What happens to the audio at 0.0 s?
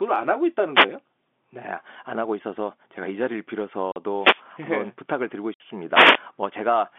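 Nothing goes wrong at 0.0 s: the speech starts intact, carried in the narrow telephone band of G.711 coding with no audible fault at that moment.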